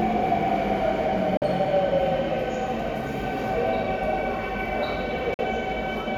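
At 1.37 to 1.44 s and again at 5.34 to 5.40 s, the sound cuts to silence for about 46 ms and then returns already further along, as if it had kept playing. That skip-ahead, which fits two lost frames, marks a likely Bluetooth dropout rather than a playback stall.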